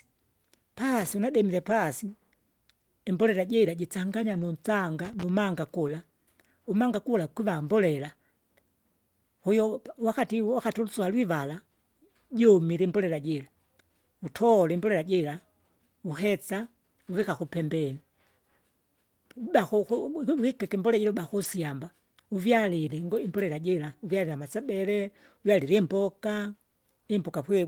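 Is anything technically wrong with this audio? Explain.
Yes, the speech has two kinds of technical fault.

A loose connector crackle occurs twice, at 1.01–1.14 s and 5.05–5.29 s. A worn or dirty contact is breaking and re-making the signal path as it shifts, chopping the audio and adding pops from any DC on the line. It sounds like an irregular scratchy burst. On a waveform it appears as jagged spikes and dropouts. A spectrogram shows thin vertical broadband streaks scattered across each span.

A lost packet rebuilt from error correction occurs six times: at 1.69–1.71 s, 4.33–4.43 s, 5.87–5.89 s, 6.73 s, 17.17–17.23 s and 21.43–21.45 s. Most are 20 ms, which fits a single lost packet. The 60 ms and 40 ms stretches fit a few consecutive ones. The decoder filled each loss with the low-bitrate copy carried in the following packet, so nothing goes silent, but those moments sound briefly rougher and noisier. 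On a spectrogram they appear as short blocks of coarser, smeared texture. The waveform shows no gap.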